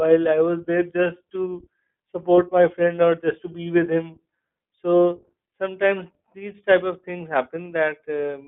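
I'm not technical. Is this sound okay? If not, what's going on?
No. The iLBC codec runs through the whole clip. It is a phone-call voice format that squeezes the sound into a narrow band, about 150 Hz to 3.5 kHz, and rebuilds each short slice separately, so the speech sounds thin, plainly rough and slightly synthetic throughout.

Lost iLBC frames occur from 2.36 to 2.39 s, just before "my friend or just". One 20 ms chunk never arrived, and the decoder filled the hole by repeating the last bit of voice with some noise, giving a brief buzzy, held sound before the speech resumes cleanly.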